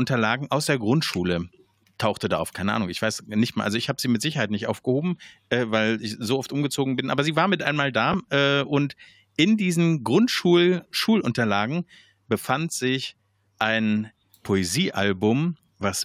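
A speech clip with chunks out of order between 8.12 and 8.14 s, after "sie war mit einmal" and before "äh und in diesen": a 5.8 ms chunk plays three chunks late, giving a brief jumbled moment. The waveform shows three abrupt steps, and the spectrogram three thin broadband vertical lines.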